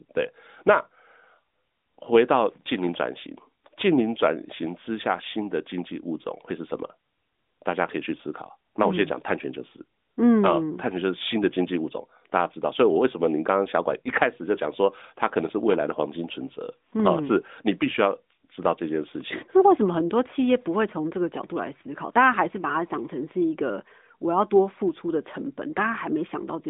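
Around 14.02 to 14.08 s there's a lost AMR speech frame, just one 20 ms frame by the sound of it. The decoder didn't get a clean frame, so it patched the gap by reusing the previous frame's pitch and vocal tract settings at reduced gain. You hear a quick dip or warble, and then the speech picks up again. It's all heard through the narrowband line, with nothing above about 3.7 kHz.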